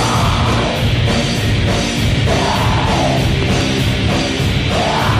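At 3.43 s a loud pop breaks in, two sharp thumps in quick succession ending by 3.63 s, peaking around 10 dB above the surrounding level. A sudden voltage step, likely from a plug, switch or static discharge, has been added to the signal, and the circuitry downstream shapes the pulse. Unlike a dropout or an edit click, nothing is removed: the sound carries on unbroken underneath both pops.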